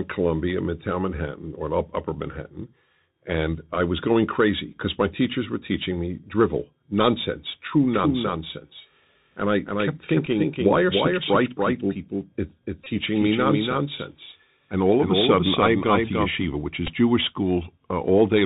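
Throughout the speech the sound is boxed in and narrow, with nothing above 4 kHz, a grainy hiss sitting under everything, and s sounds that come out scratchy and frayed. Loud, bright moments smear and distort as they outrun the coder. This is the Bluetooth CVSD headset codec, which sends one bit per sample to say whether the waveform rises or falls and adapts its step size as it goes. At a 64 kbps bit rate that step cannot keep up with fast high-frequency movement, and the damage here is plainly audible.

At 7.94 s, right after "me drivel nonsense true", a second copy of the speech appears, trailing the first by roughly 300 ms and only about 5 dB quieter. It is the full-band signal with no room colour or decay, and it cuts in and drops out abruptly at 16.44 s. This doubled audio track most likely comes from the same audio being captured twice, once through a slower path, and mixed back together.

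Three short glitches interrupt the sound. At 10.26 s there is a very short buzzy stutter. From 12.84 to 12.86 s a brief buzzy stutter appears, and at 16.87 to 16.89 s there is another short one. These are a Bluetooth headset packet repeated. Voice packets between headset and phone were lost, so the chip replayed the previous packet's bits in their place. The 7.5 ms gaps fit two 3.75 ms packets, and the 22.5 ms gap fits six, long enough to form a steady buzz near 267 Hz.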